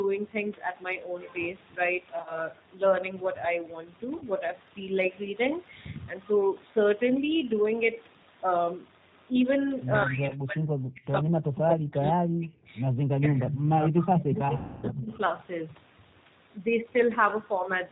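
The whole clip of speech runs through the G.729 codec, at 8 kbit/s. It rebuilds the voice from a vocal tract model, a pitch predictor and a few pulses per frame. Nothing above 4 kHz survives, so the sound is band-limited and muffled. The damage is plainly audible. Voiced sounds take on a rough, slightly synthetic edge. Breathy and noisy parts warble rather than hiss.

The first VoIP packet loss concealed by the speech codec comes between 2.14 and 2.44 s. About 80 ms goes missing in gaps scattered over 120 ms, the longest run 40 ms. The decoder fills each gap by extending its last pitch and filter, so the voice is briefly stretched and fades. A second, shorter loss of 40 ms follows at 4.17 to 4.23 s, with the same stretched fade.

From 10.04 to 10.66 s the voice drops sharply, by roughly 40 dB at its deepest. This is likely speech suppressed in double talk. An echo canceller has turned the talker down while it judges the far side to be speaking. 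Inside that dip, at 10.29 to 10.35 s, a 20 ms packet loss adds a small concealed gap. More suppression follows at 10.92 to 11.04 s, about 35 dB deep. A long stretch follows at 11.21 to 12.74 s, and another at 12.95 to 13.55 s, each down around 40 dB.

Echo leak follows, likely from a loudspeaker on the other end whose canceller let some sound through. A delayed copy of the voice returns about 155 ms late. It is heard at 13.50 to 13.58 s, only about 5 dB below the speech. It is heard again at 14.22 to 14.39 s, about 15 dB down. The copies are short.

The longest packet loss spans 14.57 to 14.88 s, about 260 ms. The concealment stretches the last sound out and lets it decay, and the voice stays weak as it recovers. A last faint echo scrap, about 25 dB down, appears at 15.07 to 15.14 s.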